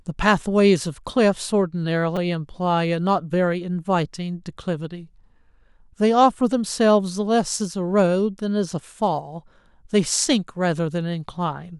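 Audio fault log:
2.16 s, repeated buffer: new audio did not reach the output in time, so the device replayed its last block, which fits a buffer of about 5 ms, three more times. The fragment repeats with a hard join at each pass, heard as a click or brief buzz, with no audio lost.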